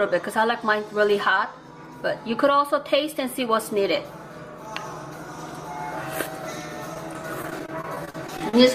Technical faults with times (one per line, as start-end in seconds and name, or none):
6.94-8.54 repeated packet loss (robotic sound)